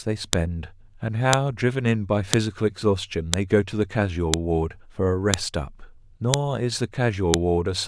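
Audio pieces about 1 s long were joined without stripping their headers, so the header bytes play as samples: the file header played as audio gives a sharp, loud click at 0.33, 1.33, 2.33, 3.34, 4.34, 5.34, 6.34 and 7.34 s, cutting across the speech regardless of level.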